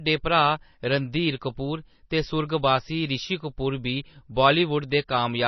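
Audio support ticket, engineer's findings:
MP3 compression, throughout. Heavy codec damage: watery, swirly speech, smeared attacks, nothing above 6 kHz. Likely a low-bitrate MP3 encode, the sound fitting about 24 kbps. Spectrogram: hard ceiling at 6 kHz, weak partials blinking on and off frame to frame.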